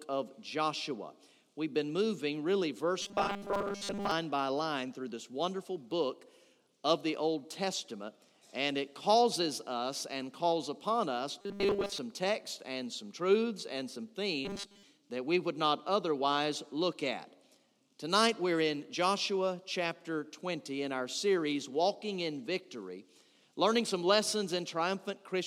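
From 3.02 to 4.11 s, again from 11.41 to 11.99 s, and briefly from 14.45 to 14.83 s, the sound takes on a rigid, metallic buzz pitched at 200 Hz. This is robotic sound from repeated short buffers, likely caused by audio arriving too slowly, so a block of about 5 ms is replayed to fill the gaps while most of the real audio is skipped. The underlying sound stays roughly traceable beneath the buzz.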